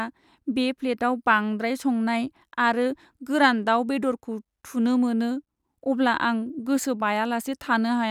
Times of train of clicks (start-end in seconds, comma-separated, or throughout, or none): none